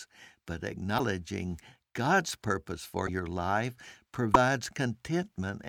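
A likely broken MP3 bit reservoir is behind three brief glitches in this speech: with stretches of the stream cut out, the frame following each gap reaches back for borrowed data and decodes bytes belonging to another frame. The result is a jump forward plus a short glitch at 0.97–1.00 s, 3.06–3.09 s and 4.33–4.36 s. Each lasts roughly one frame, consistent with 24 ms MP3 frames.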